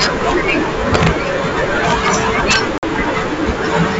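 A speech clip with integer overflow on loud passages from 0.02 to 0.5 s, 0.95 to 1.07 s, 1.88 to 2.15 s and 2.51 to 2.56 s, where peaks overshoot the limit by about 4, 4, 2 and 7 dB. The worst is in that last burst. Instead of flattening as clipping would, each overshooting peak wraps to the opposite sign, giving violent, sharp cracks. Packet loss on an ADPCM call then opens a hard-edged 50 ms silent gap from 2.78 to 2.84 s, roughly a handful of packets. Unlike a plain dropout, speech returns with brief distortion as the decoder's predictor and step size resynchronise. The wideband G.722 coding keeps speech clear up to about 7 kHz.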